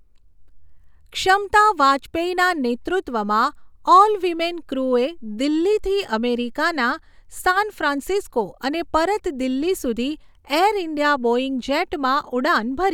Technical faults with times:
none

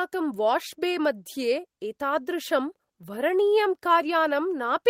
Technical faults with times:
0.00-4.90 clock drift between sender and receiver
0.76-4.44 repeated timing corrections

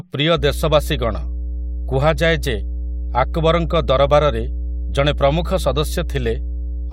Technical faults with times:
0.35-6.93 mains hum

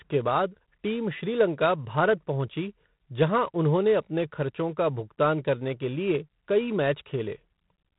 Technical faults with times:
0.00-7.98 G.726 ADPCM

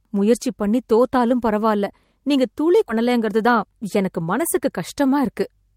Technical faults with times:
2.89-2.91 skip ahead
2.99-5.74 jitter buffer speed-up

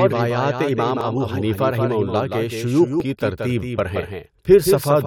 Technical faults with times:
0.00-5.07 doubled audio track
1.01 overlap between stream segments
3.00 overlap between stream segments

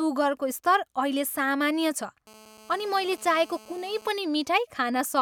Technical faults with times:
2.27-4.09 GSM phone buzz

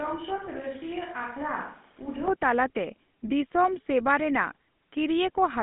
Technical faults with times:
0.00-5.63 GSM full-rate codec
0.00-2.28 switch to a distant microphone

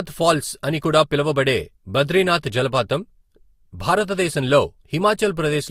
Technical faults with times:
0.00-5.70 transcoding between lossy codecs

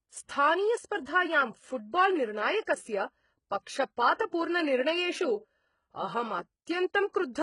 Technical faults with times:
0.00-7.42 HE-AAC compression
4.31 pre-echo

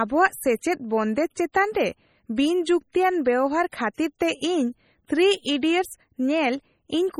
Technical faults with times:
0.00-7.19 MP3 compression
3.71 pre-echo

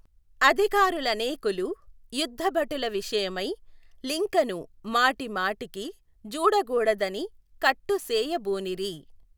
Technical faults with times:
7.01-9.38 sample clock jitter

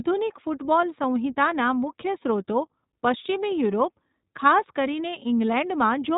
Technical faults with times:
0.00-6.18 iLBC codec

